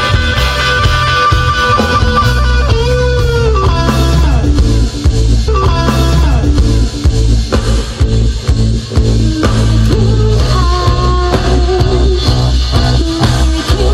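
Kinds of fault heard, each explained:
Stream segment repeated: the player queued or fetched the same chunk of the stream twice, so a stretch of the programme plays through and then plays again. Here the repeat runs from 5.47 to 7.47 s, adding about 2.0 s to the clip. Unlike a buffer stutter, which loops a few milliseconds into a buzzy rattle, this replays a whole recognisable passage, and the running time grows by the length of that passage.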